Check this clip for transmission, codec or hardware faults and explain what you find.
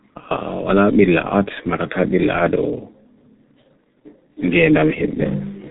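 One fault runs through the whole clip. G.723.1 codec damage, throughout: the speech is band-limited to nothing above 3.8 kHz, and its coarse, slowly updated voice model over long frames leaves the voice heavily muffled and hoarse with smeared consonants, which fits G.723.1 at around 6.3 kbit/s.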